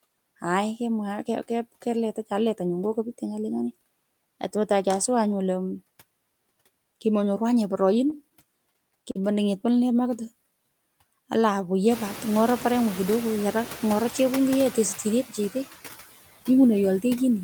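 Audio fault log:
throughout: noise suppressor artifacts. The suppressor pulls down bands it judges to be steady noise by about 19 dB, frame by frame, so the background drops away between phrases and swells back under the speech. This is clearest after the room noise rises around 12 s.
9.11–9.17 s: short stall from a late packet. A packet arrived late and the jitter buffer ran dry, so the receiver held the last sound for 38 ms, then resumed where it left off. Nothing is lost, but the delay grows by 38 ms.
9.88–10.67 s: jitter buffer slow-down. To rebuild its reserve, the receiver repeated single pitch periods and bits of pause many times over, adding 53 ms. Speech runs at 94% speed with unchanged pitch, so sounds come out drawn-out.
12.72–13.17 s: jitter buffer speed-up. With too much audio queued, the receiver cut short pitch-period pieces in quick succession, removing roughly 50 ms. Speech plays at 109% speed with unchanged pitch and sounds hurried for that stretch.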